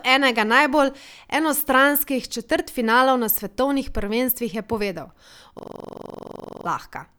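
A system hang loop interrupts this speech recording from 5.59 to 6.66 s: the computer or audio driver stalled while the sound hardware kept replaying the same stretch of its ring buffer. A 42.67 ms fragment, which fits a 2048-sample buffer, repeats about 25 times at 23.4 Hz, producing a rapid, mechanical stutter in place of the speech. About a second of the real audio is lost before normal playback resumes.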